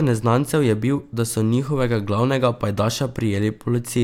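No technical faults can be heard anywhere in the speech.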